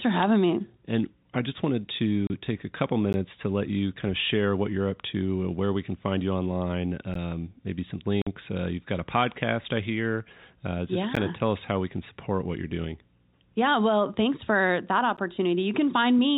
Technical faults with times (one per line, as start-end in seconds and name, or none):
2.27-2.30 packet loss filled with silence
3.13 gap between chunks
7.14 gap between chunks
8.22-8.27 packet loss filled with silence
11.15 gap between chunks
15.17 gap between chunks